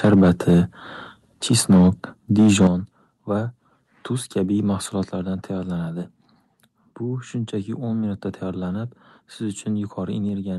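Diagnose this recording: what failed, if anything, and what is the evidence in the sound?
Microphone overload at 0.04 to 0.59 s, 1.51 to 1.89 s and 2.38 to 2.67 s. Each loud passage has a flattened, crackling edge. The peaks would have gone roughly 5, 3 and 4 dB past full scale, and the last stretch is the most heavily cut. The stage is the converter input, likely driven by an input gain set too high. The waveform tops slam into the converter's limit and square off, which produces the harsh distortion on the loudest syllables.

Microphone volume stepped down at 0.05 s, 2.67 s, 5.04 s and 10.29 s. At each point the speech and the background fall together in a single step, by about 2, 8, 4 and 2 dB. The 2.67 s drop lands right as the third clipped stretch ends. The stage is call processing. These steps are likely the call's automatic gain control reacting to clipping and cutting the device's input volume. 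Because of that, the level sinks in abrupt stairs rather than a smooth ramp. The coding noise and the top end rolling off near 12 kHz come from the Opus call path as expected.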